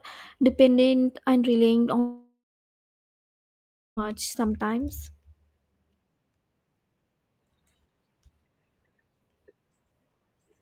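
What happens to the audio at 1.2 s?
Nothing goes wrong at 1.2 s; the speech there is intact, with no dropout, click, distortion or other fault to be heard.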